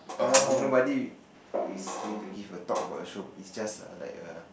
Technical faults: switch to a distant microphone

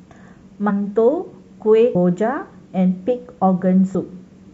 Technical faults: compressed frames skipped

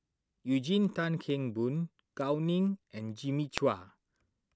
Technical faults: word clock ticks

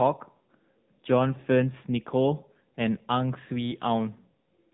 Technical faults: AMR narrowband mobile codec

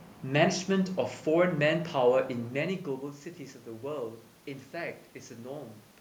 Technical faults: none

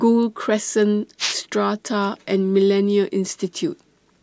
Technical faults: wireless microphone noise hit

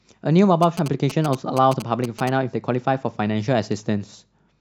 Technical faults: GSM signalling bursts

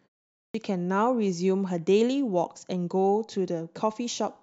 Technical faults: clipped start after a pause

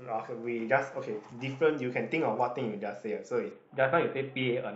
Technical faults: Bluetooth SBC bit pool drop

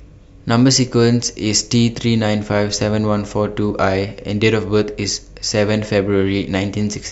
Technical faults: none

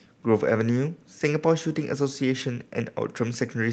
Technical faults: none

